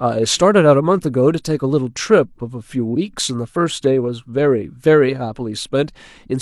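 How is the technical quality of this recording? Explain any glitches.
No technical glitches can be heard anywhere in the recording, and the signal stays steady and intact throughout.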